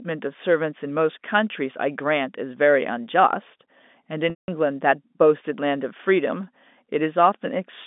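At 4.30 s the speech breaks up for about 180 ms, to 4.48 s. This is packet loss with pitch repetition, and the gap fits roughly nine 20 ms packets. Heard through the narrow telephone band of the G.711 coding, the last pitch period repeats briefly as a held, buzzy tone, then fades to silence before the speech cross-fades back in.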